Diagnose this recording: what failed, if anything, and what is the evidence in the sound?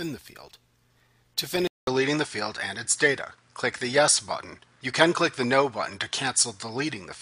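At 1.67 s the audio drops out for 200 ms, then resumes with nothing above 10.5 kHz, a shifted level of a few dB and a new noise floor through to the end. This points to the input likely switched to a poorer device at the driver stage.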